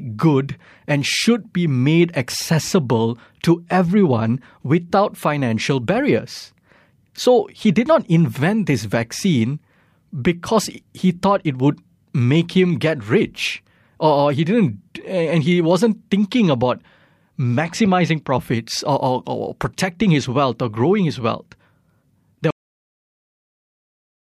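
At 22.51 s the speech stops abruptly. This is a cut-off end. The final stretch of audio was never written out, so the sound breaks off mid-utterance. It drops straight to digital silence with no natural decay, and that silence runs for about 1.75 s.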